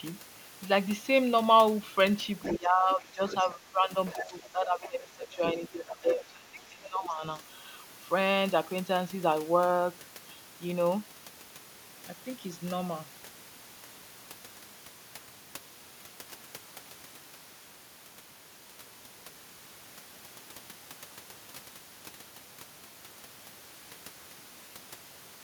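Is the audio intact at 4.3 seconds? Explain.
No. At 4.3 s the talker's voice sits inside a stretch of speech suppressed in double talk, running from 4.14 to 7.23 s. Over roughly three seconds the voice dips, at its deepest by around 15 dB. This is likely an echo canceller that, with both sides talking at once, could not separate the talker from the loudspeaker echo and turned both down. Unlike a leak, nothing is added: the wanted voice itself loses level.

Just before, from 4.06 to 4.27 s, there is a brief case of the other side's voice leaking through, a scrap sitting about 10 dB under the talker. The likely cause is loudspeaker sound reaching the microphone that the canceller failed to fully remove. It differs from the suppression because a second, foreign voice is present rather than the main voice being pushed down. That leak has already ended by 4.3 s, while the suppression is still under way.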